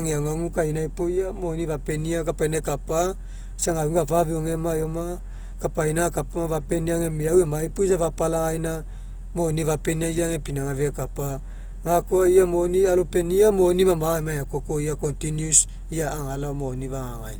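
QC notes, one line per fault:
throughout: Opus compression, likely running short of bits in its CELT music mode, which fits a rate near 24 kbps. The encoder fills starved bands with folded or noise content, so the speech sounds plainly grainy, rough and noisy, though bandwidth stays full up to 20.2 kHz.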